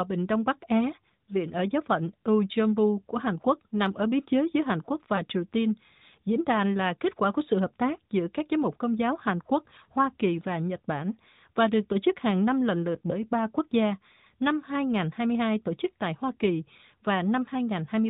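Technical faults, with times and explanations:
5.16–5.22 s, lost AMR speech frames: there's a quick dip or warble, which fits a single 20 ms frame failing its checksum. The AMR decoder covers the gap by reusing the last good pitch and vocal tract settings at lower gain, so it's a short smear rather than a dropout.
9.84–9.86 s, lost AMR speech frames: same thing again, a brief wobble that points to one more lost frame, patched over from the previous frame and heard through the band-limited AMR-NB sound.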